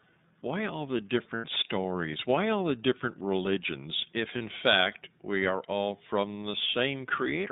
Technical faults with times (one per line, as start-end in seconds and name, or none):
0.00-7.52 iLBC codec
1.35-1.45 lost iLBC frames
4.37-4.42 lost iLBC frames